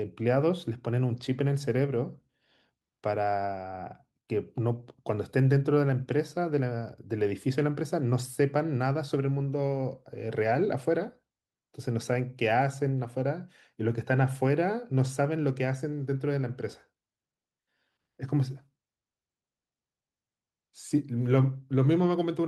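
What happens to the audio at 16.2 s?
Nothing goes wrong at 16.2 s: the speech carries on intact through that moment, with no dropout, click, distortion or other fault.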